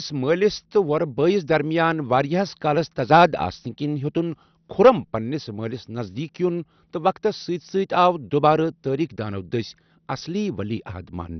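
Throughout the speech, nothing reaches above 6.1 kHz, and what remains sounds dull, gurgling and granular. This is likely heavy MP2 compression at about 48 kbps. Unlike a plain low-pass filter, sub-bands flicker on and off and those left are coarsely quantised.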